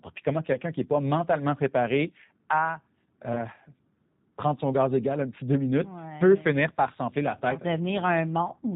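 The speech in this clip has passed through a G.729 codec, whose bandwidth and sound match an 8 kbit/s G.729A stream. The codec rebuilds each 10 ms frame from a vocal-tract filter, a pitch predictor and a few coded pulses instead of the actual waveform. Everything above 4 kHz is gone, so the speech sounds muffled, rough and faintly synthetic, and the damage is plainly audible throughout. There are also two moments of VoIP packet loss concealed by the speech codec. Each points to a single lost packet of about 20 ms. When the data stopped arriving, the decoder kept repeating its last pitch and filter settings at falling gain. Because each frame depends on the one before, the disturbance lasts longer than the gap itself. From 0.53 to 0.58 s, between "puis comment" and "qui n'est pas mentalement", the voice smears into a brief stretched, weakened patch. From 3.33 to 3.43 s, just after "pas mentalement préparé à", a similar stretched, fading sound takes about a tenth of a second to recover.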